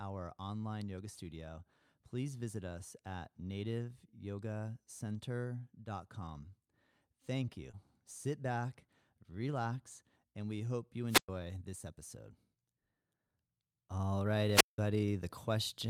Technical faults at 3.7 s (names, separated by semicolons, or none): none